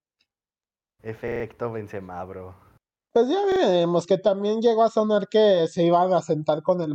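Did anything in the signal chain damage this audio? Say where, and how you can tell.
Yes, at the driver or buffer stage: a repeated buffer. From 1.28 to 1.44 s the same short piece of speech plays four extra times, and from 3.52 to 3.60 s twice more, just before "que también llegó a". Each repeat is 40 ms long, which fits a 40 ms buffer replayed when fresh audio arrived late. On a waveform you would see identical blocks tiled end to end with hard joins, and on a spectrogram vertical seams at each join.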